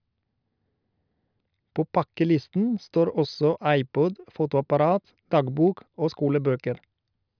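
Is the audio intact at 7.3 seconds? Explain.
Yes, the speech at 7.3 seconds is intact, with no audible fault at that moment.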